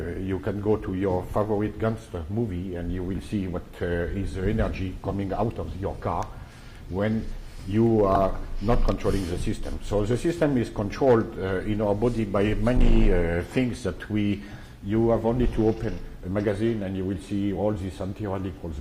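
At 8.15 s there is a repeated buffer. A tiny slice of sound, about 1.33 ms long, plays four extra times back to back, with hard joins between repeats. That is too short to stutter, so it comes across as a brief click or buzz. The slice length fits a 64-sample buffer that the device replayed when new audio arrived late.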